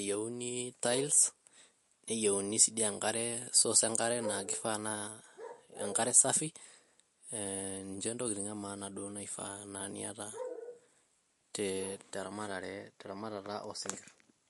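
Throughout the speech, the sound is watery and swirly, with metallic chirps on s sounds, smeared attacks and nothing above 11.3 kHz. The likely cause is MP3 compression at a rate that fits about 48 kbps, starving the encoder so it cuts treble and flickers weak frequency lines between frames.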